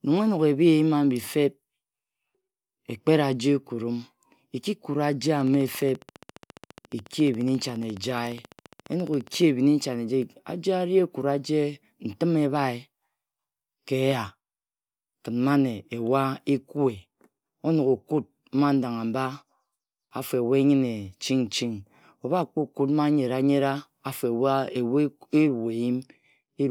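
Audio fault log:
5.41 to 9.43 s, train of clicks: A recurring electrical pulse, likely interference from nearby equipment or a faulty connection or power supply, enters the signal at a steady 14.5 times per second for about four seconds, some fifty clicks in all. Each click has much the same shape and reaches roughly the level of the speech itself, so the sound carries a rapid, even ticking that sits on top of the speech and stays audible through the pauses.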